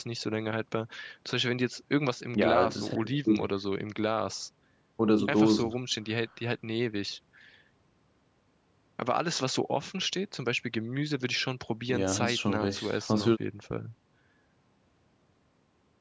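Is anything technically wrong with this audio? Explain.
No, nothing stood out as a technical problem on listening to this speech; the call microphone processing trims the lowest bass and leaves nothing above about 8 kHz, which is expected for that path.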